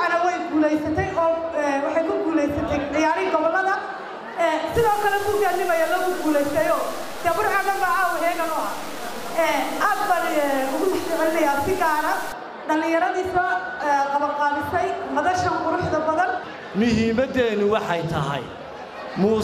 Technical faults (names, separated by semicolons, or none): low bit depth without dither